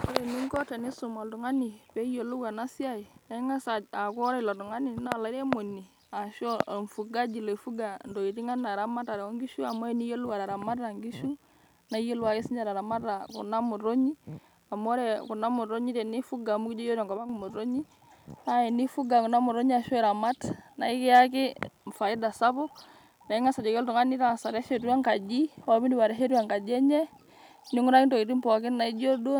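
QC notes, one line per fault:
17.17–17.29 s, one channel drops out: one stereo channel likely cuts out briefly, so the mono-summed speech abruptly falls about 6 dB, then returns.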